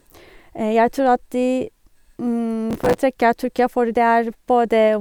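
From 2.70 s to 2.98 s the speech is overlaid with a burst of processor overload crackle, a gritty tearing texture lasting a little under 0.3 s. The processor fell behind and missed buffer deadlines again and again, roughly thirty of them. Each miss replayed a fragment of stale audio with hard edges. The short spacing of the discontinuities suggests a buffer of about 5 ms. The crackle stops once the overload clears.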